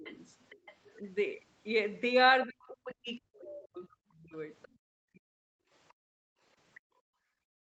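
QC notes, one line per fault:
0.0–0.1 s, 2.46–4.34 s and 5.14–5.51 s, speech suppressed in double talk: the talker's speech sinks, by about 15 dB in the first brief dip and by roughly 40 dB in the later two, which last about 1.5 s and then 0.4 s. The likely cause is an echo canceller that could not tell near-end speech from loudspeaker echo and attenuated both. Unlike gating, the words themselves lose level, not just the room tone.
0.04–0.76 s, 3.51–3.6 s and 4.62–4.68 s, other side's voice leaking through: a second voice sits under the talker, about 20 dB down in the first two spots and about 25 dB down in the last. The long opening stretch carries it for most of a second, while the later two are short scraps. This is likely residual loudspeaker echo the canceller failed to remove from the microphone.
4.68–4.86 s and 5.92 s to the end, background gated by the echo canceller: the room sound falls away by about 32 dB, first as a dip of about 0.2 s right after the 4.62 s leak, then continuously through the close of the clip. 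The canceller clamped the microphone while the loudspeaker was active. It is heard as the floor going dead. The lack of content above 8 kHz throughout comes from the Opus call path and is not part of this fault.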